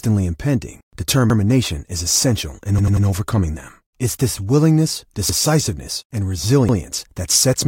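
At 1.30 to 1.39 s, just before "is essential in overcoming", a repeated buffer occurs: fresh audio missed its deadline, so the same 93 ms chunk, which fits a 4096-sample buffer, plays twice. After "is essential in", from 2.79 to 3.07 s, it repeats three extra times, a stutter. Single repeats follow at 5.29 to 5.39 s after "this willingness" and at 6.69 to 6.78 s. Waveforms show identical copied blocks with abrupt seams; spectrograms show duplicated patches bounded by vertical edges.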